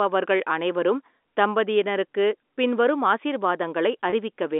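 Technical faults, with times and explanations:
4.10 to 4.12 s, packet loss with pitch repetition: a gap of about 20 ms, consistent with a single lost packet, was filled by repeating the last pitch period. This gives a brief held, slightly buzzy quality in the speech, heard through the narrow 250 to 3.6 kHz telephone band of G.711 coding.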